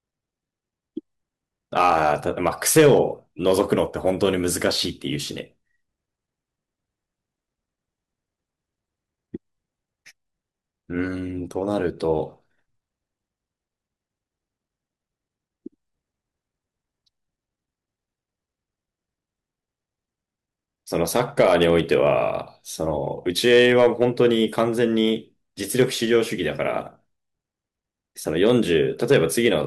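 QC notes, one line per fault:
1.77–3.01 s, hard clipping. Peaks are pushed about 6 dB past the limit and cut flat. The square tops add high harmonics, heard as harsh crackle on loud syllables.
21.16–22.10 s, hard clipping. Overload of about 5 dB flattens the peaks again. The same gritty edge returns.
23.45–24.63 s, hard clipping. About 4 dB over. Lighter crackle on the loudest moments.
28.46–29.48 s, hard clipping. About 3 dB over. Crackle on the peaks only.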